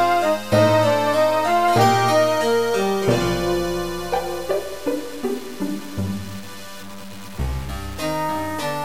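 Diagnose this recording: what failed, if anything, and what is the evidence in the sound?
Low bit depth without dither, from sample-format conversion: grainy distortion follows sound throughout, roughly 20 dB down, likely 6-bit truncation; stair-stepped waveform, level-tracking spectrogram grit.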